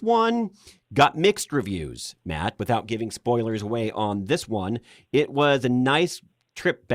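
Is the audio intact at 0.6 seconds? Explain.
Yes, at 0.6 seconds the audio is intact, with no audible fault at that point in the speech.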